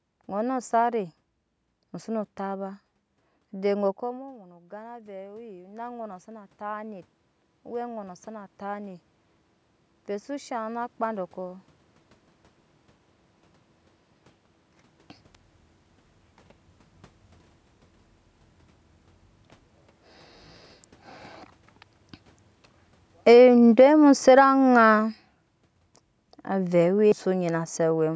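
At 4.02 s the talker moves away from the microphone and the input level falls by about 18 dB. The automatic gain control responds slowly, with its gain rising by about 12 dB between 4.02 and 9.09 s. The voice first drops away, then climbs back over those five seconds, and the room noise swells up along with it. Because the gain recovers only part of the loss, the speech stays somewhat quieter than before the move.

From 23.12 to 25.07 s the automatic gain control is falling. It judges the input too loud, or its background noise too strong, and lowers its gain by about 7 dB over roughly two seconds. The speech sinks steadily, and the background noise drops at the same rate. Voice and room fade together, which marks it as a gain change rather than the talker moving, since a talker moving would change the voice alone.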